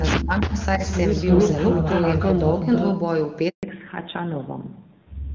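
Speech suppressed in double talk hits this speech recording twice: from 0.17 to 0.57 s the level falls by roughly 35 dB, and from 0.77 to 0.83 s by about 10 dB. The likely cause is an echo canceller that heard both parties at once, could not tell the talker from returning loudspeaker sound, and attenuated everything. An echo leak follows from 0.91 to 2.97 s. A copy of the voice trails the original by about 323 ms at roughly the same loudness, which points to a speakerphone whose canceller failed to strip what its microphone caught and sent it back down the line. A handover gap at 3.49 to 3.63 s silences the audio for 140 ms as the call switches networks and no speech frames arrive. Whatever was said in that interval is gone. Right after it, at 3.63 s, comes a fallback to narrowband. The call drops from AMR-WB at 23.85 kbit/s to AMR-NB at 7.4 kbit/s, so nothing above 4 kHz survives to the end, and the voice turns muffled and grainier than the earlier wideband portion.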